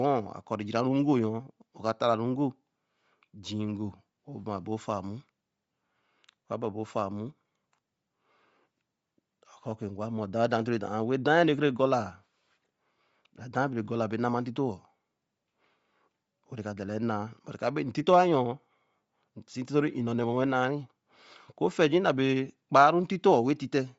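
Throughout the speech, the sound carries a breathy, grainy edge, with nothing above 7.7 kHz, pointing to Bluetooth LC3 compression, likely at a low rate near 32 kbps. Unlike a plain low-pass, the remaining upper band sounds noise-filled rather than cleanly dull.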